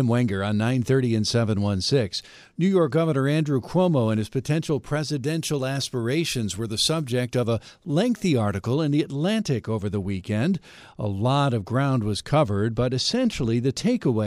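From 5.24 s to 8.74 s, pre-emphasis was left on: the treble was lifted before storage, and the matching de-emphasis that should undo it on playback was never applied. The tilt fits the CD 50/15 µs curve, leaving 10 kHz about 8 dB hotter relative to 1 kHz. For those three and a half seconds the speech turns thin and overly bright, with sibilants hissing forward and the body of the sound receding.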